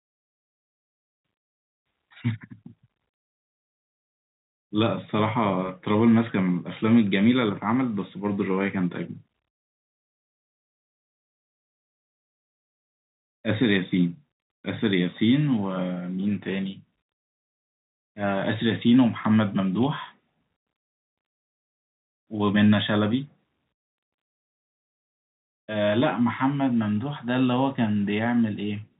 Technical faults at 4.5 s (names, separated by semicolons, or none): none